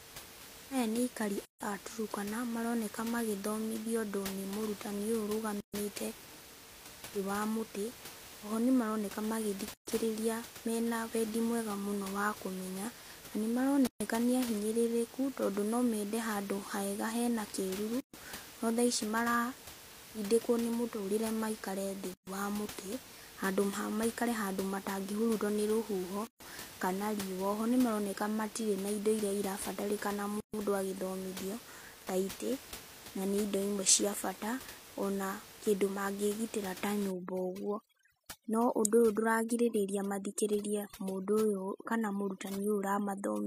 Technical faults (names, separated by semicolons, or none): gap at a join of encoded pieces; overdone noise removal